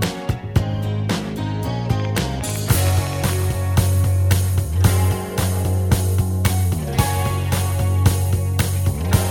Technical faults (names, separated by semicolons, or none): train of clicks